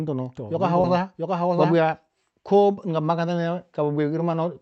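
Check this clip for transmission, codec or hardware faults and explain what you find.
Two faults are present, both in the first two seconds of this speech clip.

From the start to 1.76 s there is a doubled audio track. A dry, full-band copy trails roughly 0.7 s behind at about 5 dB lower, likely from a second capture path, and it stops abruptly.

At 0.81 to 0.86 s there is a short concealed packet loss. About 20 ms never arrived, and the decoder extrapolated from the preceding sound, leaving a brief smear before blending back.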